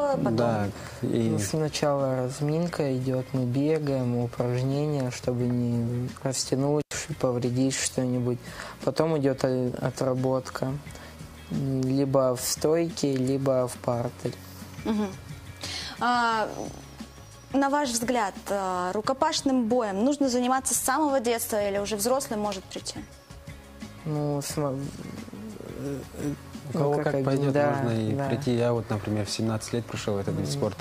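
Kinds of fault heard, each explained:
Intermittent contact: a loose connection briefly opens, dropping the sound for about 92 ms at 6.81 s, with crackle at each edge of the gap.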